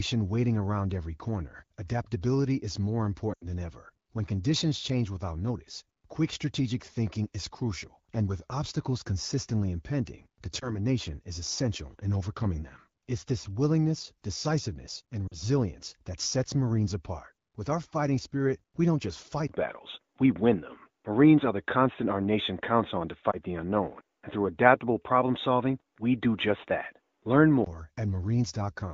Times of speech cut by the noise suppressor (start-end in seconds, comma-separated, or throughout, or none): none